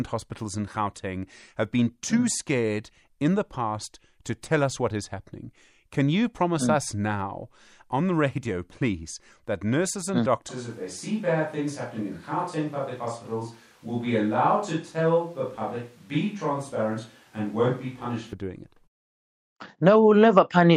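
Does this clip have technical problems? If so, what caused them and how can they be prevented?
Yes. From 10.49 to 18.33 s the speech abruptly turns roomy and hollow, with thinner bass and a faint background noise sitting well below it, while the loudness stays about the same. This is likely a switch to a distant microphone after the close microphone's signal dropped out. Monitoring the close microphone's feed throughout recording, with a backup recorder on it, prevents this.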